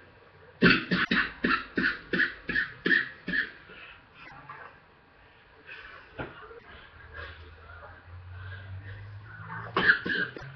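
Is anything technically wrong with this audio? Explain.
Yes. Four short disruptions cut into the audio, at 1.01–1.10 s, 4.22–4.32 s, 6.55–6.64 s and 10.33–10.43 s, each about 0.1 s long. This is damaged data in a compressed stream: corrupted bytes make the decoder misread those frames and lose sync until it finds the next valid frame header.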